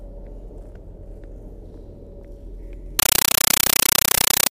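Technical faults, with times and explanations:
2.99–4.50 s, compressed stream played as audio: an AC-3 bitstream, apparently around 384 kbps, reached the output as plain PCM instead of being decoded. Each frame arrives as an 8 ms burst of data followed by zero padding, 31.25 times a second, so the sound is replaced by very loud, chattering static.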